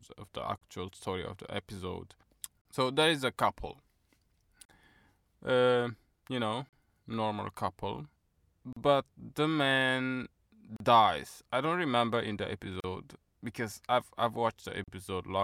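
Short silences open in the speech at 0.58, 2.61, 4.65, 6.69, 8.73, 10.76, 12.80 and 14.84 s, each about 36 to 38 ms long and spaced every 2.0 s. This is a gap at a join of encoded pieces: encoder start delay and last-frame padding were left in at each splice. Unlike a dropout, nothing is lost; the speech resumes exactly where it stopped, across smeared edges.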